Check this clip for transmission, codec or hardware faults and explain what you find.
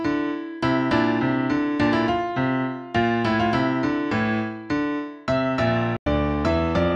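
One fault turns up, near the end. Digital broadcast dropout, 5.97 to 6.07 s: the receiver muted after losing frames, leaving a 96 ms hole of silence, consistent with about three frames. That stretch is gone, not just quieter.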